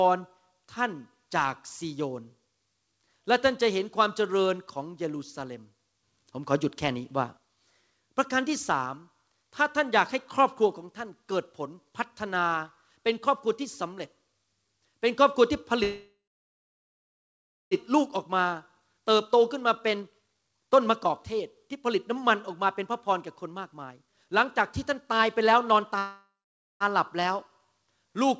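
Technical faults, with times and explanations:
15.83–17.74 s, call audio freeze: the sound stalls and the last fragment is stretched into a fading buzz that drops to about 1.56 s of silence, then resumes where it left off. The likely cause is delayed packets draining the jitter buffer, inserting about 1.88 s of gap with nothing lost.
18.80–24.46 s, jitter buffer speed-up: the audio runs about 16% fast at unchanged pitch and sounds hurried. After the backlog arrived, the receiver repeatedly trimmed pitch-period-length pieces, shedding roughly a second of audio to pull the delay back down.
24.89–25.97 s, jitter buffer speed-up: a milder repeat, about 8% fast at the same pitch, as the buffer cuts small pitch-period pieces again to shed roughly a tenth of a second of excess delay. The hurried quality is less pronounced than in the earlier stretch.
25.98–26.83 s, call audio freeze: another stall in which the last sound is drawn out as a decaying buzz and then about 0.52 s of silence before the audio picks up intact. 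This is likely another jitter buffer underrun, adding about 0.82 s of delay with nothing missing.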